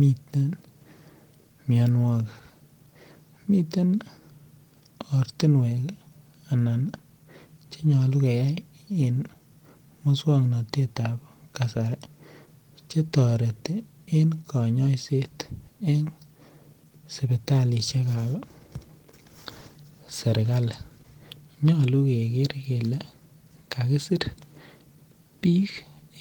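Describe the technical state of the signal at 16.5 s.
At 16.5 s the signal is intact, with no fault to be heard at that moment.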